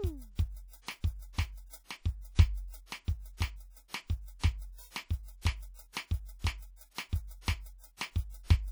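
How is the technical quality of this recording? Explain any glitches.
The technical quality is poor. Plainly audible codec damage runs through the whole music clip. It is likely WMA compression. The sound rings and smears around each attack. A washy hiss rises and falls with the music. Some quiet detail drops out entirely. A transform codec with long blocks spreads its quantisation noise over tens of milliseconds. Starved of bits, it zeroes weak spectral lines. The damage fits an early WMA encoder at a low bitrate, around 48 kbps.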